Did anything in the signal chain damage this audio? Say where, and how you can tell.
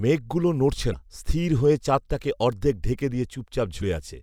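Yes. Damaged data in a compressed stream shows up twice in this speech, at 0.90 to 0.94 s and again at 3.78 to 3.82 s, each a brief 40 ms glitch that breaks through the speech. The damage is in the codec stage: some of the encoded bytes were corrupted, so the decoder misreads those frames, loses sync and turns out garbage until it locks onto the next valid frame header.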